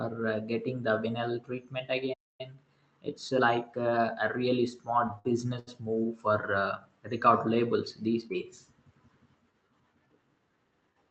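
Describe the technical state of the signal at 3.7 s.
At 3.7 s the signal is inside a time-compressed catch-up that runs from 2.41 s, just after "getting the vinyl treatment", to 4.13 s, before "a really". To clear the backlog left by a stall, the player removes short slices of audio and cross-fades across each splice, giving about 1.15 times normal speed. The speech sounds hurried but keeps its pitch. The call-codec band limit near 8 kHz carries through the whole passage.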